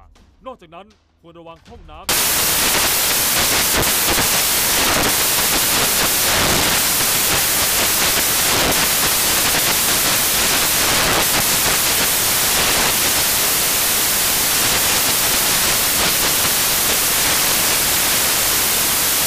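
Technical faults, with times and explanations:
2.09–19.26 s, samples built from the wrong bytes: the bytes of each sample are misassembled, so fast-changing low bits become the large part of each value, giving loud, harsh broadband noise to the end. The spectrogram shows flat full-band energy, and the waveform is dense.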